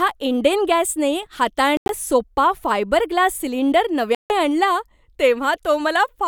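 At 1.77 s the speech cuts out in short holes until 1.91 s. About 107 ms goes missing across 122 ms, and the longest gap is 91 ms. At 4.15 s it drops again, losing 152 ms of sound before it ends at 4.33 s. Both holes have hard edges or a fade of a few milliseconds, and the speech resumes further on, as if it had kept playing. This sounds like a Bluetooth dropout. Audio packets likely arrived too late and were discarded.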